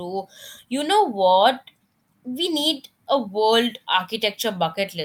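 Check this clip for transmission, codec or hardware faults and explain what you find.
No faults turn up anywhere in this speech recording. There is nothing in it that calls for an explanation.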